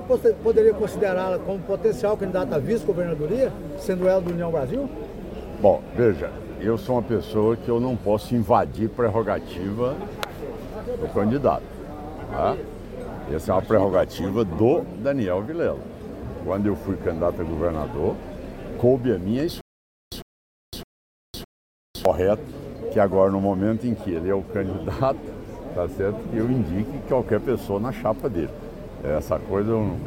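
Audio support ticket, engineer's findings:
Playback likely stalled in the player or stream buffer, 19.61 to 22.05 s. Stutter with silent gaps: a 102 ms fragment replays 4 times, each followed by about 508 ms of digital silence, period 611 ms. Audio due in that span lost.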